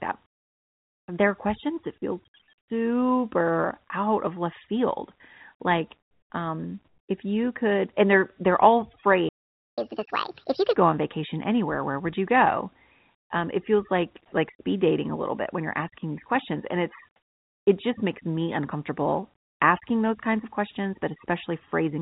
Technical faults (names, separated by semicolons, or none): comfort noise in place of the background; playback stall; catch-up at higher speed